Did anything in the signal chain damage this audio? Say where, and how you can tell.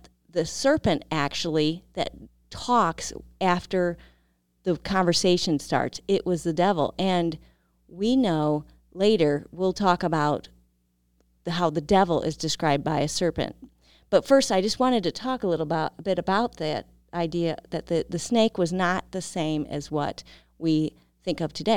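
No, nothing in the signal chain damaged this recording.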